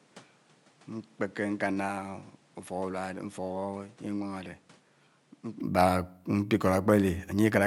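From the top of the clip until 5.6 s, the speech sounds dull and a bit boxy. Nothing comes through above 11.4 kHz, the level sits around 10 dB lower, and there's a fresh noise floor roughly 30 dB under the speech. At 5.6 s it opens up to full brightness with no gap at all. That pattern points to an input switched to a poorer device, most likely a second mic or a headset's call profile, before the system hopped back to the better one.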